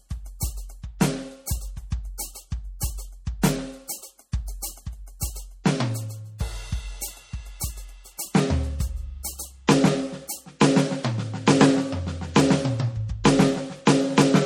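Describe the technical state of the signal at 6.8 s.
At 6.8 s the music carries plainly audible swirly, watery MP3 compression damage, as it does throughout, likely from an encoder starved near 48 kbps zeroing weak bands. A spectrogram shows a hard ceiling at 18.4 kHz and flickering holes below it.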